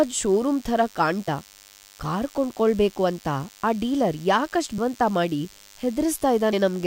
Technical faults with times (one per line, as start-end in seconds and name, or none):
0.00-6.87 DECT cordless phone buzz
1.27 compressed frames skipped
4.77 compressed frames skipped
6.52 compressed frames skipped